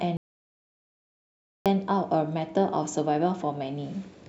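The input signal was likely lost from 0.17 to 1.66 s, with the recorder writing silence in its place: an audio dropout to silence. The speech cuts off abruptly into dead, roomless silence, then resumes mid-flow, with about 1.49 s of content gone.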